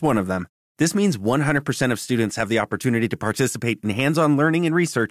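Nothing in this bit of speech stands out as a technical fault at any point, so there's nothing to flag here.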